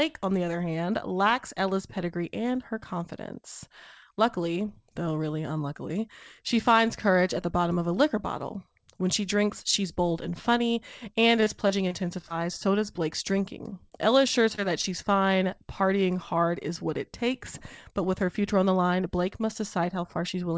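Speech carried over a call path, band-limited with nothing above 8 kHz, which fits a wideband call codec such as G.722 at 64 kbps. From 11.36 to 12.32 s there is repeated packet loss, heard as a robotic, choppy stretch. Short holes keep recurring, the longest about 26 ms, and about 80 ms of audio is missing in total. The receiver patches each hole by extending the preceding sound, so about 11% of that span is synthetic continuation rather than real signal, giving the stuttering texture. Three isolated instances of short concealed packet loss follow, at 13.90–13.93 s, 14.55–14.60 s and 14.82–14.85 s, each about 20 ms of missing audio. In each, the decoder bridges the gap by carrying the last sound forward, for 16 to 25 ms, and then crossfading back into the real stream, which is heard as a brief smear or wobble at each point.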